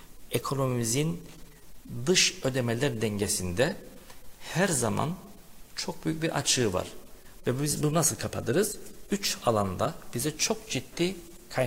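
No technical faults can be heard anywhere in this clip.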